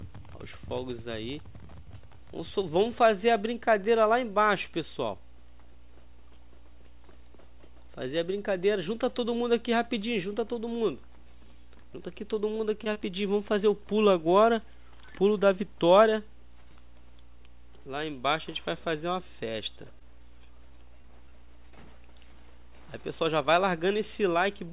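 Around 12.84 to 12.88 s, again at 12.94 to 12.97 s, and once more at 19.99 to 20.02 s there's short concealed packet loss: a bit of audio arrived too late, so the receiver stretched the preceding sound over the gap. You hear each one as a tiny smear or wobble before things blend back.

From 20.68 to 21.33 s it turns into repeated packet loss, giving a robotic sound: five separate holes, none longer than about 15 ms, each patched by extending the last sound. Roughly a tenth of that stretch is filler, so it comes across as choppy. Everything sits below 4 kHz throughout, which fits a narrowband call codec like G.711.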